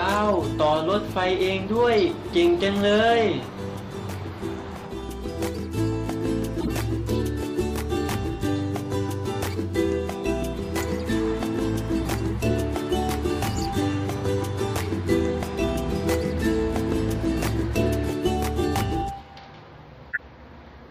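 Corrupt frames decoded at 6.60–6.71 s, 12.01–12.07 s and 20.11–20.19 s. Each is a brief glitch spanning three to seven codec frames, where flipped bits fed the decoder wrong gains and codes, scattering energy to the wrong frequencies, peaking around -15 to -20 dBFS.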